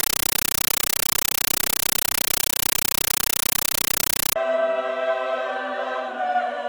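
From 0.0 to 4.36 s, compressed stream played as audio: undecoded Dolby Digital bitstream heard as loud chattering static, about 9.3 ms noise bursts 31.25 times a second, which fits a 448 kbps AC-3 stream.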